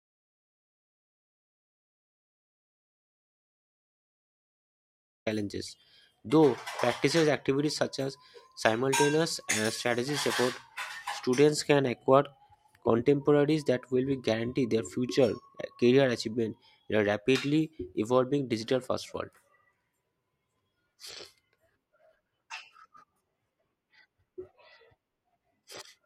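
From the very start until 5.26 s the audio is an audio dropout to silence: silence with no room tone, then speech arrives already mid-flow. The input was likely lost while recording continued. The waveform shows a flat line, the spectrogram a fully blank stretch.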